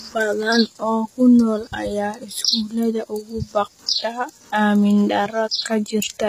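Throughout, s sounds turn gritty and metallic, with nothing above 14.9 kHz; treble rebuilt from copied lower bands, unlike plain band-limiting, suggests HE-AAC compression, likely near 20 kbps.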